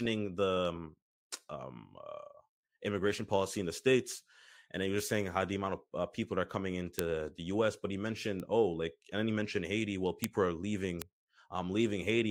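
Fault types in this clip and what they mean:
Bit error spike: a single flipped bit in a digital word throws one sample far off its true value, jumping by a power of two before the next sample snaps back. This speech clip has four, at 6.99, 8.40, 10.24 and 11.02 s, each one sample long and heard as a sharp tick unrelated to the sound, peaking at about -5, -23, -5 and -11 dBFS. A waveform shows a lone vertical needle. A spectrogram shows a thin full-band vertical line.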